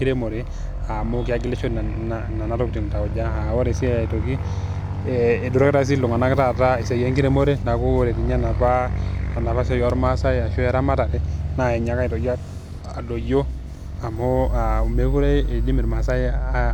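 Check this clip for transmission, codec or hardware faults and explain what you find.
There's one hardware fault. From 14.16 to 16.16 s, a USB whine sits under the speech: a fixed tone at 8 kHz, strongest at 16 kHz, roughly 35 dB down, from 125-microsecond microframe current leaking through power or ground.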